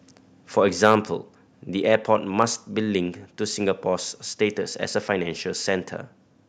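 A speech clip with two bursts of harsh crackle, at 0.83 to 0.95 s and a shorter one at 2.4 to 2.43 s, the first pushing about 5 dB past the converter's limit and the second about 1 dB. This is likely microphone overload: flattened peak tops on a few percent of samples, then about one percent. Unlike codec distortion, which smears across the whole clip, the grit arrives only on the loudest moments and vanishes as the level drops.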